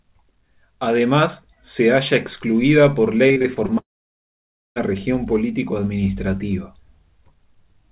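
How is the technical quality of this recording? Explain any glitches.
The recording has two clear glitches in the middle. Both occur on a narrowband call line that carries nothing above 4 kHz, consistent with G.711 A-law at 64 kbps.

From 3.28 to 3.70 s there is repeated packet loss, giving a robotic sound. Six short holes open up, the longest about 39 ms. The receiver patches each hole by stretching the last bit of sound. About a third of this stretch is patched, roughly 140 ms of audio in total. The result is choppy, with pieces missing.

From 3.78 to 4.78 s the audio cuts out almost completely. A brief continuation of the previous sound appears, then it fades to silence for most of that second. Audio resumes afterwards, but the missing material never returns. This is likely a long network dropout. Nearly a full second of audio failed to arrive, and the receiver could only extend the last sound briefly before giving up.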